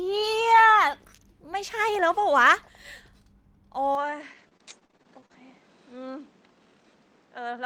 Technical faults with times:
3.95-7.66 input switched to a poorer device
4.21-5.35 repeated packet loss (robotic sound)

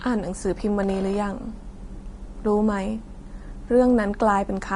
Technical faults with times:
0.00-4.76 Vorbis compression

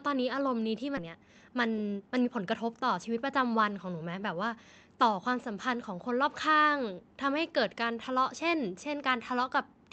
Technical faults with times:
0.97-0.99 skip ahead
1.07-3.05 jitter buffer speed-up

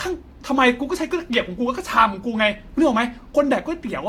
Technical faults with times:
0.00-4.08 generation loss

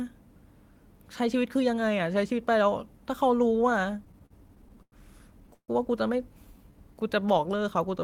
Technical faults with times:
3.91-4.95 repeated stalls (stutter)
5.54-5.71 call audio freeze
6.45-7.61 jitter buffer slow-down

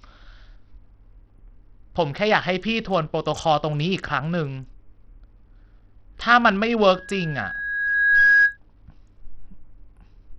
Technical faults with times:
0.00-10.39 Bluetooth SBC compression
6.94-8.57 loudspeaker feedback squeal

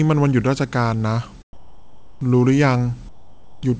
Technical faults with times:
1.53-2.21 comfort noise in place of the background
3.09-3.63 comfort noise in place of the background

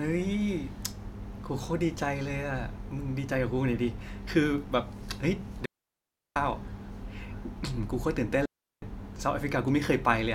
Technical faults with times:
5.65-6.36 digital wireless dropout
8.46-8.82 digital wireless dropout

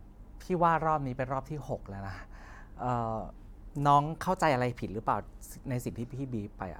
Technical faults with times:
none

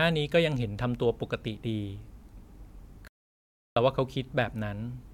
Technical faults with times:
3.08-3.76 playback stall

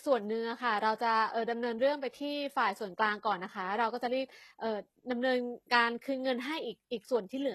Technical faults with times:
0.00-7.55 HE-AAC compression

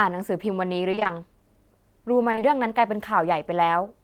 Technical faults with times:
0.91-1.11 repeated packet loss (robotic sound)
2.31-2.43 short concealed packet loss

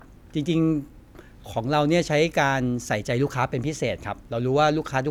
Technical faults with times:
none

